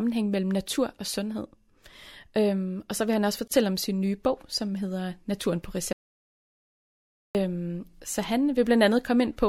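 At 3.48 s, right after "så vil han også", the speech stops for about 32 ms, with slightly softened edges, then resumes mid-flow at "om sin nye bog" as if nothing was missed. This is a gap at a join of encoded pieces. The audio was encoded in separate chunks, which fits pieces of about 6 s, and joined without trimming, so each chunk's encoder start-up delay and final-frame padding remain as a short hole at the seam, ending at 3.51 s.

From 5.93 s to 7.35 s the speech cuts off abruptly into total silence, with no room tone underneath, and then comes back in mid-flow just as suddenly. That is an audio dropout to silence. About 1.42 s of speech is simply gone rather than muted or faded. The likely cause is that the input signal was lost for that stretch, through a disconnection, link failure or accidental mute, while recording carried on writing silence.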